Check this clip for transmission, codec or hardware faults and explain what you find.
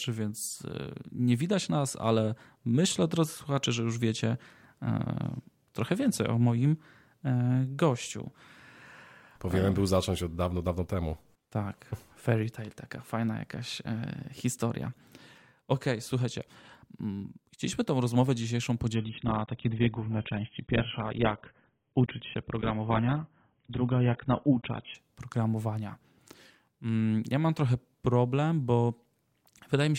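One fault: an adaptive stream at a lower bitrate, from 18.95 to 24.95 s. A slowed connection made the player switch to a far leaner encode, fitting roughly 16 kbit/s AAC. The speech abruptly loses everything above 3.8 kHz and turns dull, with no gap.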